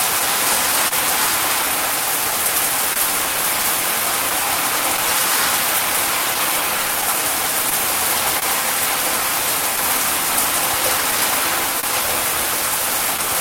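A recording of sounds with two timing faults running through it. Clock drift between sender and receiver is present throughout: the sending clock runs slow by roughly one and a half percent, so the receiver's buffer keeps draining. Short stretches get repeated or held at uneven intervals, heard as faint stutters. On a waveform these show up as tiny duplicated segments or brief flat dips scattered irregularly. Scattered short gaps also appear between 0.19 s and 13.20 s: around fifteen lost or late packets, each patched by continuing the preceding sound. Together they cover about 200 ms, the longest near 30 ms. A spectrogram shows each one as a thin vertical band of frozen, smeared texture, and the waveform shows a brief repeated cycle with small discontinuities at its edges.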